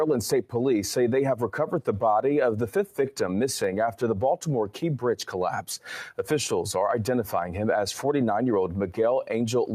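Throughout the clip, a noise suppressor applied to music or sounds is working against the material. A suppressor tuned for speech treats sustained tones, ambience and decaying tails as background noise and pulls them down, while sharper onsets pass through. The level of held sound dips and recovers by something like 5 dB, giving a fluttering, thinned texture. Unlike compressor pumping, which follows overall loudness, these dips target the steady and reverberant parts and leave attacks intact.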